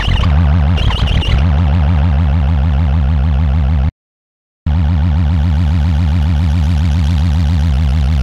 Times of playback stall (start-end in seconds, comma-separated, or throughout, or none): 3.89-4.67